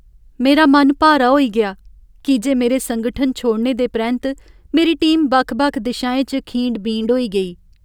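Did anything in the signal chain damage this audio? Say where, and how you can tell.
No, nothing along the chain seems to have harmed this one; I can't pick out any stage that left a mark on it.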